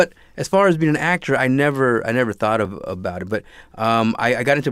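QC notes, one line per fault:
2.65 s, repeated buffer: between "never I never thought" and "about it", a piece about 2.67 ms long plays twice in a row, which fits a 128-sample buffer being replayed when fresh audio failed to arrive on time. With a repeat that short, there is no audible stutter. The hard join at the repeat is heard as a click or brief buzz. The replay adds a few milliseconds rather than dropping any of the speech.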